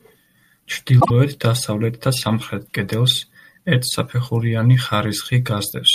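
Frames out of order, from 1.00 to 1.11 s: two neighbouring blocks of the speech were decoded in swapped sequence, so this brief stretch plays its second part before its first. The swapped pieces are short, which fits single frames of about 24 ms each being exchanged. The result is a quick garbled flutter. No time goes missing.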